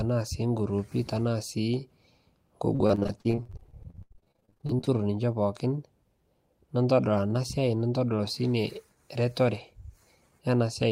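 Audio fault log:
2.75–4.89 s, repeated packet loss (robotic sound): dozens of holes up to 87 ms, each filled by repeating the last sound, hence the choppy, robotic stretch before "ninchee pookin".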